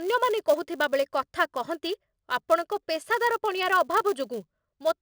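A filter restarted on every block runs through the whole of this speech clip, producing a steady 200 Hz buzz under the voice. The filter loses its state at each block boundary and begins from silence, so every block opens with a small click. Repeating every 5 ms, these clicks fuse into a buzz that rises and falls with the speech level.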